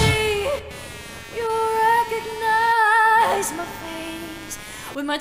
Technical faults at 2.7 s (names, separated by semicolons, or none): computer activity noise